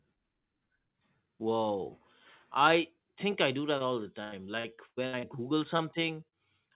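At 3.78 to 3.82 s there is a short concealed packet loss. About 20 ms of audio failed to arrive, and the receiver patched it by extending the preceding sound, which leaves a brief smear. From 4.24 to 5.25 s, repeated packet loss (robotic sound) sets in. Six gaps, the longest 94 ms, mean roughly a third of that stretch is synthesized continuation, giving choppy speech with fragments missing. Further short concealed losses follow at 5.77 to 5.81 s (20 ms missing) and 6.29 to 6.36 s (40 ms missing, slightly stretched), each heard as a momentary wobble. Throughout, the band stops at 4 kHz, which fits a G.711 call path.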